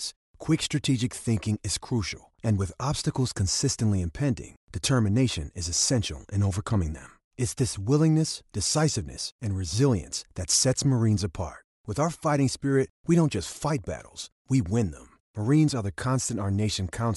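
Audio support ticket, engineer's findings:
No audible faults found in the speech signal at any point, so nothing in the playback path needs further investigation for this ticket.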